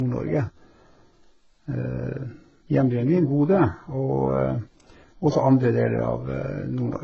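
Throughout, the speech stops at 7.2 kHz and carries mismatched, layered codec artefacts. This sounds like transcoding between lossy codecs, likely starting from a very low-bitrate encode.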